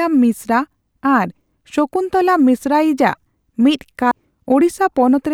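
At 4.11 s the speech jumps ahead with a small blip: a stream segment skipped, likely because one segment failed to load and playback moved on.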